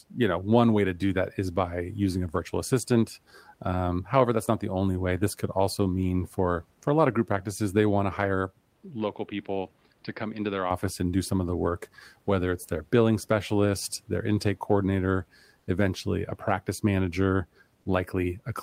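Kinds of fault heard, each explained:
Input switched to a poorer device: Between 8.75 and 10.71 s, after "they want to hire" and before "and do some of", the speech suddenly turns duller and boxier. Nothing above 5.2 kHz remains, the level drops about 5 dB, and a different noise floor sits roughly 40 dB below the speech. There is no gap at either change. The likely cause is the input moving to a lower-grade microphone or headset profile and then back. On a spectrogram the top of the band is cut off flat at 5.2 kHz for that stretch, and the waveform shrinks slightly.
Comfort noise in place of the background: For 80 ms starting at 15.59 s, between "specialist their intake coordinator" and "eventually a practice manager", the room's real background disappears and a smoother synthetic noise takes its place, about 2 dB quieter. The likely cause is discontinuous transmission: the sender stopped sending in the pause, and the receiver filled the gap with synthetic noise, which fits Opus DTX. 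On a spectrogram the textured room noise briefly becomes an even, uniform wash, and the waveform shows a small dip in the noise floor.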